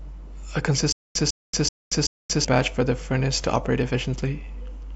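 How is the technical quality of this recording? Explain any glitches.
The recording has one clear playback fault in the speech. From 0.92 to 2.45 s there is a stutter with silent gaps: a 151 ms burst repeats 4 times, each followed by 230 ms of digital silence, a 381 ms cycle. The likely cause is a stalled stream replaying its last buffered fragment on each retry, so the audio due in that span is lost.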